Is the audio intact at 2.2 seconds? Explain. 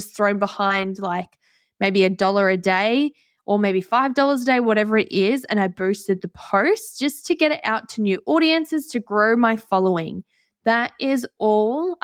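No. At 2.21 to 2.23 s, a single packet appears to have been lost in transit, and the decoder filled the 20 ms hole with a lost packet rebuilt from error correction. The following packet carried a low-bitrate duplicate of the missing audio, and the decoder played that copy. There is no silence or dropout, but that brief stretch of speech sounds coarser and noisier than the surrounding audio, a short roughened patch rather than a gap.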